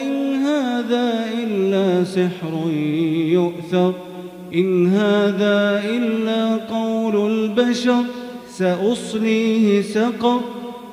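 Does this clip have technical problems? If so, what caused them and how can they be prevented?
Yes. Low bit depth with dither runs through the whole clip as a constant, even hiss with no distortion, sitting roughly 35 dB below the signal. The audio was reduced to about 9 bits, and dither was added before rounding, so the error became steady white noise. On a spectrogram it appears as a flat, uniform floor across all frequencies; on a waveform, quiet passages show a persistent fuzzy band. Prevent it by keeping at least 16-bit resolution through processing and export.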